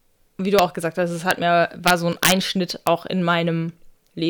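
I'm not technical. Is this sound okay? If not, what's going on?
No. There are sharp, violent cracks at 0.59, 1.31 and 2.87 seconds, and a longer stretch of harsh crackling from about 1.88 to 2.32 seconds. This is integer overflow. When the speech got louder than the recording could hold, the numbers didn't stop at the top. They wrapped around to the opposite extreme instead. Each loud peak flips suddenly, and that sounds much nastier than ordinary distortion.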